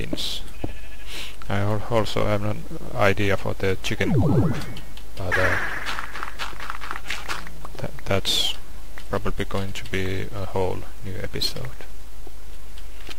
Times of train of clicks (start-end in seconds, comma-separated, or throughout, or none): none